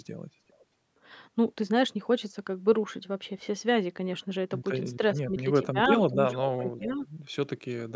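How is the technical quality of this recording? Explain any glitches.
The recording has two related call-path glitches, both in the speech: stray echo coming back, and the talker being briefly turned down while the far side's sound plays.

Echo leak appears at 0.48 to 0.64 s, 5.97 to 6.01 s, 6.31 to 6.39 s and 6.8 to 7.06 s. A delayed copy of the speech, trailing by about 0.39 to 0.40 s, gets through, likely because a loudspeaker echo canceller left residue. It is barely audible at first, then fairly strong around 6 s, roughly 10 to 15 dB below the speech.

Speech suppressed in double talk occurs at 6.09 to 6.16 s and 6.63 to 7.02 s. With echo and talker overlapping, the canceller likely could not tell them apart and ducked both. The voice dips by about 10 dB in the first short spot and about 5 dB across the longer one.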